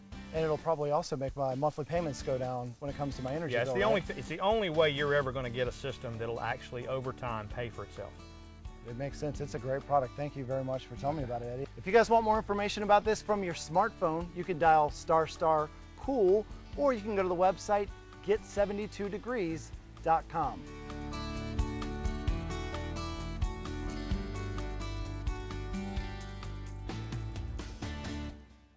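Nothing stood out on listening, apart from the band limit expected of a wideband call path, with nothing heard above about 8 kHz.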